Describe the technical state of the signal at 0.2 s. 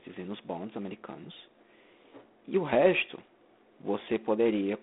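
At 0.2 s the speech is carrying G.726 ADPCM damage, present from start to finish. The coder sends only a few bits per sample, each describing the error against a running prediction. Too few bits leave coarse steps, heard here as a harsh, rasping hiss that rises and falls with the speech level. That roughness fits the 24 kbit/s mode. The band is telephone-narrow, about 200 Hz to 3.5 kHz, with nothing above 3.8 kHz.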